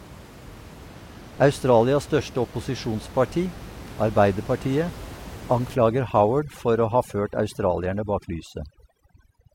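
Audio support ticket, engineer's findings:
Adaptive stream at a lower bitrate, 0.88 to 4.88 s. Abrupt quality drop with no gap: top end thins and the band above roughly 16.2 kHz goes missing. Sounds like the player switched to a low-bitrate HE-AAC rendition, about 32 kbit/s, during a throughput dip, then back. Unlike a network dropout, there is no silence or stutter, and both transitions are instant.

Overdone noise removal, 5.75 s to end of clip. Room noise, about 18 dB below the speech, drops and breaks up into twinkling specks. Quiet components of the speech are gated out along with it. Points to a denoiser set too aggressively. Unlike the bitrate switch, the background itself is being removed, the damage tracks the noise floor, and it persists rather than recovering.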